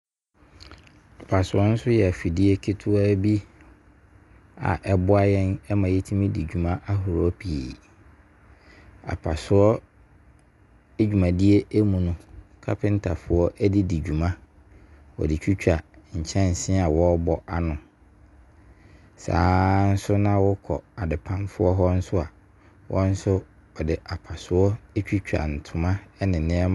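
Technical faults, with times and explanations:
Throughout: Dolby Digital compression, likely at a low bitrate, with the damage plainly audible across the speech. Nothing is present above 11.4 kHz, so sibilants and breath lose their top and the voice sounds dull. With so few bits, many frequency lines in each coded block get no detail of their own and are filled with dither noise, leaving a rough, fluttering grain around voiced tones, which fits a stream of around 64 kbps.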